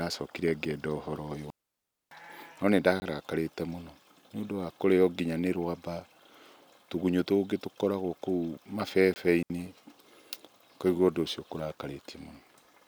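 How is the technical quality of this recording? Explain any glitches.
The speech in this recording is interrupted by two kinds of gap.

The digital wireless dropouts fall at two points: one from 1.50 to 2.11 s, just after "ngĩenda ũhoro ũyũ", about 610 ms long, and a shorter one from 9.43 to 9.50 s, about 72 ms. In each, the radio link lost too much data, so the receiver muted itself behind a very brief fade. Each is heard as a clean hole of near silence with no noise burst on either side. The soft edges distinguish these from the zero blocks.

The blocks of digital silence fall at 3.00 to 3.02 s and 9.14 to 9.16 s, each 20 ms long. Here a chunk of samples became zeros, probably because the output buffer was not filled in time. The audio drops straight to digital silence and returns without any fade. At this length each one comes across as a short hole with abrupt edges, which separates it from the faded dropouts.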